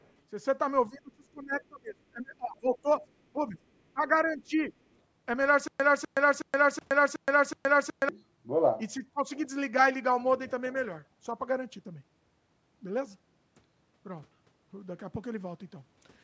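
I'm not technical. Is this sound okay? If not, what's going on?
No. From 0.01 to 0.12 s and again at 4.13 to 4.31 s, a faint second voice is heard: other side's voice leaking through, likely from an echo canceller that missed some loudspeaker sound. It's an extra voice, not a dip.

Between 0.89 and 3.04 s, 3.33 to 3.58 s, 3.93 to 4.02 s, and 4.24 to 4.72 s, the main voice sinks or drops out in pieces. This is speech suppressed in double talk, likely because both sides spoke at once.

From 5.68 to 8.09 s, a quarter-second burst repeats six times with short silences between: stutter with silent gaps, likely a stalled stream. Unlike the dips, it repeats the same sound evenly.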